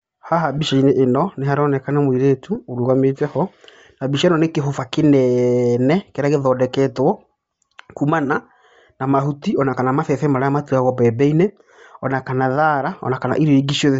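Throughout the speech there is a breathy, grainy edge on the upper frequencies, most likely from Bluetooth LC3 compression at a rate that fits about 32 kbps. The encoder zeroes much of the high band and refills it with noise, so a spectrogram shows speckled, patchy texture above the lower harmonics.

At 0.58 s, lost LE Audio frames leave a 10 ms gap. The decoder repeats the previous spectrum with randomised signs, producing a short noisy smear. The spectrogram shows a brief vertical band of blurred energy where the harmonics are missing. The same thing happens at 2.55 s, just before "ũrũgamĩte ho".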